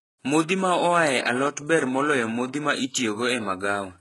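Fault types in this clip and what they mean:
HE-AAC compression, throughout the clip: the speech has a bright but synthetic treble, with s sounds coming out gritty and metallic, and nothing at all above 11.5 kHz. This is likely spectral band replication, where only the lower band is truly coded and the upper band is rebuilt from copied lower content under a coarse envelope. The heavy damage fits a very low bitrate of around 12 kbps.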